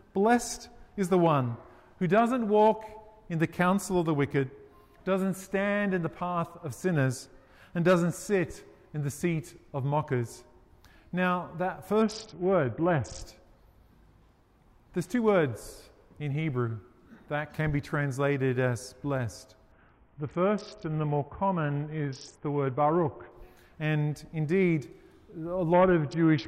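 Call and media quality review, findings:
Bluetooth SBC bit pool drop, 12.02–13.22 s, 19.72–23.32 s, and 25.73 s to end. Treble dulls, gritty quantisation noise rises, then clears on recovery in the first two episodes. Component: A2DP SBC encoder under link congestion. Starving the encoder strips the upper sub-bands and coarsely quantises the rest. The degree of loss fits a bit pool cut from 31 to about 6, near 55 kbps. The longest episode runs 3.6 s.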